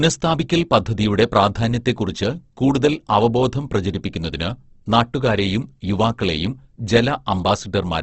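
Throughout, the speech sounds grainy and rough, with nothing above 8.1 kHz. This points to low-bitrate Opus compression, likely around 16 kbps, noise-filling starved bands.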